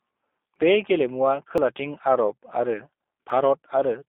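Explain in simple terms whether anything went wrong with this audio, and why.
The whole clip passes through the G.729 codec, a phone-call speech coder that rebuilds the speech from a simplified model instead of keeping the actual sound. Nothing above about 3.6 kHz survives, so the speech sounds thin and muffled, and it also has a clearly rough, slightly synthetic edge. A plain telephone filter would sound muffled but would not add that roughness.

There are three short skips, each a dropped buffer (overrun). The likely cause is that the recording program fell behind and the hardware overwrote a chunk of sound before it was collected. The first, at 0.56 s just before "बे गेलेमुआ", loses about a twentieth of a second. The second, at 1.58 s just after "बे गेलेमुआ", and the third, at 3.3 s, each lose about a fiftieth of a second. At each one the sound jumps ahead. This differs from a dropout, which would leave a short silent gap.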